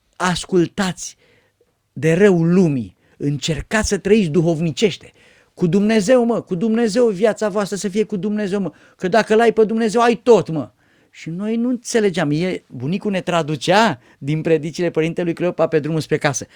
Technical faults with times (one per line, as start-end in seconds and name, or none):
0.00-16.55 crude rate conversion